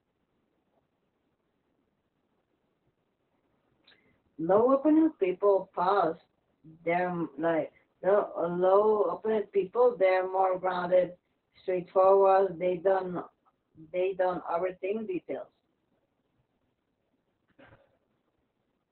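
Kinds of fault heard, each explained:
Opus voice compression: the speech runs through Opus's SILK coder, cut to narrowband with nothing above 4.3 kHz, sounding muffled, hoarse and a bit robotic, which fits roughly 8 kbps.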